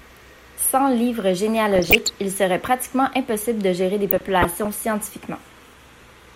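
Bit errors on a weak DAB signal slip past the error correction into the MP2 stream, corrupting samples, which put short blips of noise in single sub-bands, and scale factors, which make sub-bands jump in level for up to a frame. The result is DAB burbling over the speech, first from 1.72 to 2.14 s, just before "il serait pratiquement impossible", then from 4.10 to 4.66 s, after "impossible de gérer des". Both bursts point to an error rate below one percent.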